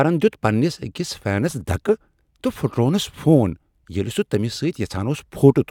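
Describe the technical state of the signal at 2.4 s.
At 2.4 s the speech signal is intact, with no audible fault at that moment.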